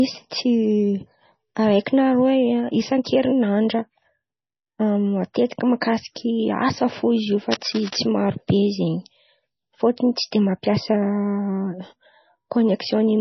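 From the very start, the whole clip has a watery, swirly quality, with metallic chirps on the s sounds and smeared attacks, and nothing at all above 6 kHz. That points to heavy damage from likely MP3 compression at a starved bitrate, something around 24 kbps. With so few bits, the encoder drops weaker frequency lines, which flicker in and out from frame to frame, and it chops off the treble at a fixed ceiling.

Then from 7.51 to 7.97 s there's a burst of scratchy, rustling noise over the speech, roughly 10 dB below it. The sound points to cable scratch noise, likely from a worn cable, connector or control carrying a DC voltage getting moved. Its contact resistance jumps around rapidly, and that throws dense, uneven crackle into the signal for about half a second.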